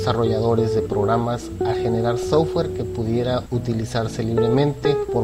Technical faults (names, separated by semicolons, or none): DAB burbling